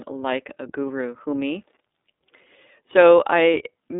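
From start to finish, the speech carries the iLBC codec's imprint, and it is plainly audible. The codec codes each 30 ms frame's excitation on its own, at a rate that fits 13.33 kbps, so the speech comes through clear but slightly rough and synthetic. The band is held to roughly 250 Hz to 3.7 kHz, which strips away low body and all upper brightness and leaves a thin, telephone-like sound.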